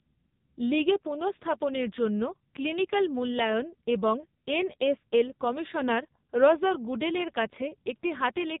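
The whole clip runs through AMR narrowband mobile coding: nothing above 3.8 kHz, and speech turns buzzy and synthetic, which fits a low 5.9 kbps mode.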